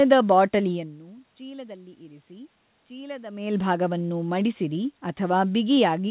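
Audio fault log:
No faults found in this speech recording.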